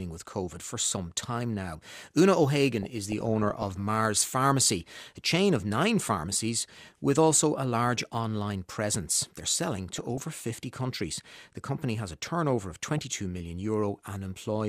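Speech clip with DAB burbling at 2.83–3.80 s, 4.87–5.05 s just before "a chain of nine", 9.88–10.24 s, and 12.83–13.02 s after "has a turnover of". Weak reception, with a bit error rate of roughly 0.4 to 0.5 percent, lets bit errors slip past correction into the MP2 data, so wrong samples put short blips of noise in single sub-bands and wrong scale factors make sub-bands jump in level for up to a frame.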